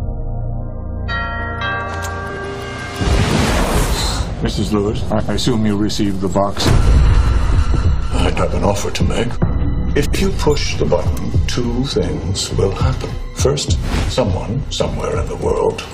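At 2.29 to 2.45 s, frames out of order swap two adjacent runs of about 70 ms each (consistent with three-frame blocks), producing a garbled flutter. Unlike a dropout, no time is lost.

At 4.95 s a DC step shifts the waveform's zero line, heard as a low thump while the sound continues unchanged. The offset lasts until 11.65 s, rather than the brief crackle of a glitch.

Within that span, the same frame reordering recurs at 5.10 to 5.30 s, 7.66 to 7.86 s and 9.95 to 10.15 s, each with swapped blocks of about 93 ms (fitting four-frame runs).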